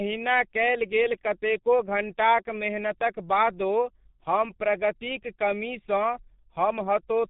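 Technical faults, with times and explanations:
Throughout, G.723.1 codec: the speech sounds muffled and hoarse, with nothing above about 3.8 kHz and smeared consonants. That heavy damage fits a very low rate, around 6 kbit/s, where the voice model updates only every 30 ms frame, so quick sounds blur together.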